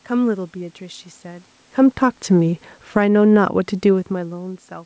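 From 1.7 to 3.13 s, automatic gain falling pulls the level down by about 8 dB. The control judged the input too loud or its background noise too strong. Speech and room noise sink together.

From 3.04 to 3.9 s, automatic gain rising follows. The input dropped by about 18 dB, so the gain climbs back about 4 dB. Voice and background swell together.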